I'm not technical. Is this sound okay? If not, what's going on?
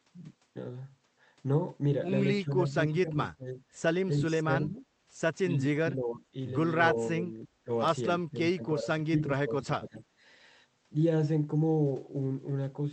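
No. Speech suppressed in double talk: the voice dips or partly drops out at 2.4 to 3.2 s, 3.4 to 3.6 s, 4.1 to 4.9 s, 5.5 to 5.6 s, 5.8 to 6.3 s, 7.1 to 7.7 s, and longest from 8.3 to 10.0 s. The likely cause is both ends talking at once. The call's echo control couldn't tell this voice apart from the other side's sound coming out of the speaker, so it turned both down.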